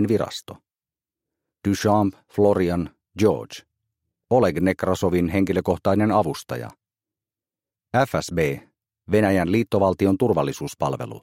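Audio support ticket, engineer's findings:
No audible faults found on review; no action needed.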